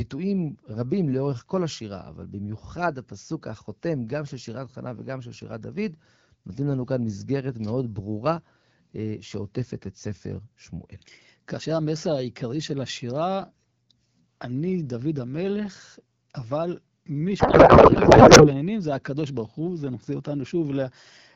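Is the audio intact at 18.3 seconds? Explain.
No. From 17.39 to 18.51 s a codec payload misread occurs: octet-aligned AMR frames are unpacked as bandwidth-efficient, so the speech becomes garbled noise and warble.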